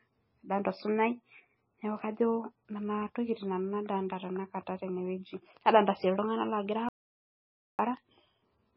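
From start to finish the speech has nothing above 5.5 kHz and a watery, swirling texture, with smeared consonant onsets and flickering sibilants. This is likely heavy MP3 compression, consistent with roughly 17 kbps: the encoder cuts the treble and drops weak frequency components that then switch on and off between frames.

At 6.89 s the sound cuts off abruptly and returns at 7.79 s, leaving 0.9 s of silence with no room tone. This audio dropout to silence points to a lost input, with the recorder writing silence until the signal came back.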